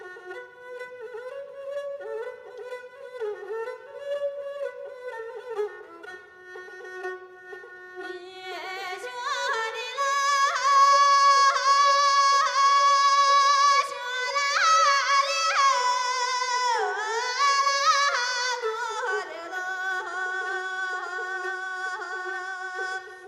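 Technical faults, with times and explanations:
Nothing technical stands out here; there are no faults to list.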